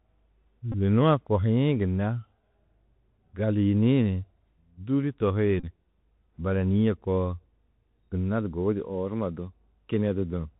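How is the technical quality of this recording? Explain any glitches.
The quality is poor: the speech has narrowband headset sound throughout, plus two short glitches.

The Bluetooth CVSD headset codec's one-bit delta modulation leaves nothing above 4 kHz, scratchy s sounds and granular hiss; a spectrogram shows a hard ceiling with grainy fill.

Bluetooth headset packet repeats at 0.72 to 0.75 s and 5.60 to 5.65 s decode the last packet's bits again in place of lost packets, giving a brief buzz near 267 Hz, visible as 3.75 ms periodic waveform repetition.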